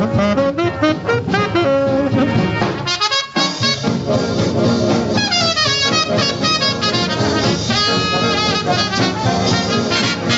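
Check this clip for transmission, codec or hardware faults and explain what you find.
One fault is present, gain pumping, audible throughout the clip. Throughout, the gain drops by around 10 dB under each loud sound and recovers in the gaps, leaving the dynamics squashed. The likely cause is input gain set far too high, with a fast limiter clamping each peak. The top end stopping at 8 kHz matches the call path's bandwidth.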